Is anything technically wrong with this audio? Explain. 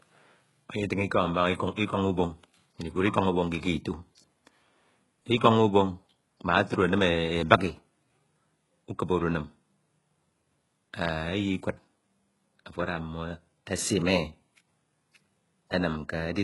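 Yes. Throughout the speech there is heavy damage consistent with HE-AAC compression, likely at around 12 kbps. The treble is rebuilt from copied lower bands, so s sounds turn gritty and lispy. A spectrogram shows blocky, repeated-looking upper bands that stop sharply at 11.5 kHz.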